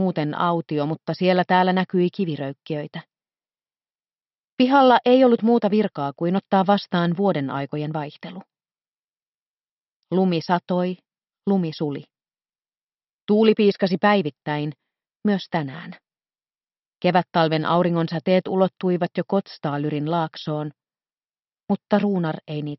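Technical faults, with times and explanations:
No technical faults can be heard in this audio. Nothing in it calls for a time or an explanation.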